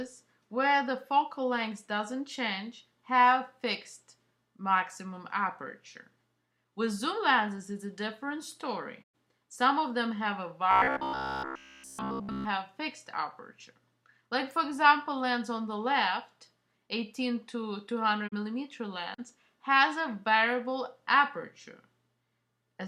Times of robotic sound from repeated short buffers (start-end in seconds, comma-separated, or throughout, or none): 10.71-12.45